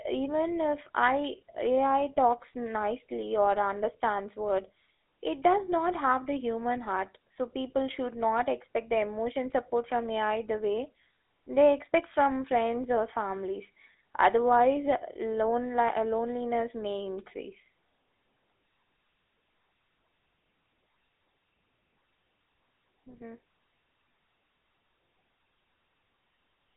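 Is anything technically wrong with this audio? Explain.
Yes, the speech has gone through a GSM full-rate codec from start to finish. That old phone codec models the vocal tract and rebuilds the voice from a sparse, regularly spaced pulse excitation, and the result here is plainly audible: a buzzy, gravelly roughness. The band is phone-narrow, roughly 250 Hz to 3.7 kHz, with nothing above 3.8 kHz, which fits the 13 kbps GSM full-rate path.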